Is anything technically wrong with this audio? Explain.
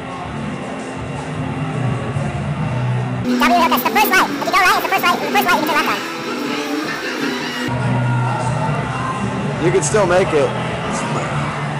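Yes. From 3.25 to 7.68 s there is a section at the wrong speed: the audio runs at twice its recorded rate, so the sound turns hurried and jumps up around ten semitones in pitch. The likely cause is that this stretch was played or resampled against the wrong clock. On a spectrogram, every harmonic and formant band shifts sharply upward for that span; in the waveform, events arrive twice as densely and cycles look compressed.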